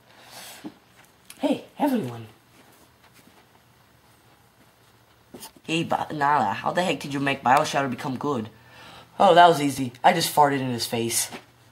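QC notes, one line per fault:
9.78 s and 10.90 s: dropped buffer (overrun). An abrupt jump forward. Around 10 ms of audio is missing each time, likely from unread input being overwritten.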